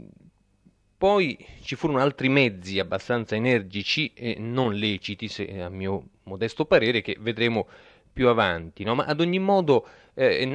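Listening to this speech recording, nothing stood out as a technical problem.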